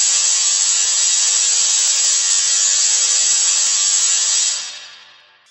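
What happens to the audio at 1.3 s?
At 1.3 s, as throughout, interleaved audio read as planar plays 85 ms blocks at half speed: an octave low, doubled, choppy, with spectrogram seams recurring at 11.7 Hz.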